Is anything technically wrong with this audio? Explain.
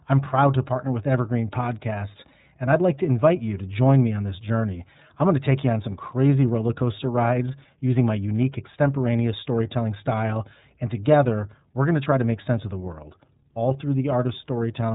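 Yes. The iLBC codec runs throughout the speech. Each 30 ms frame's excitation is coded on its own, consistent with the 13.33 kbps mode. Nothing above 3.8 kHz survives, so the speech sounds muffled, and it is plainly rough and synthetic in texture.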